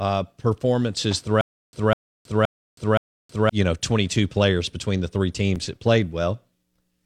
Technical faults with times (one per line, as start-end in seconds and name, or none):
1.41-3.49 stutter with silent gaps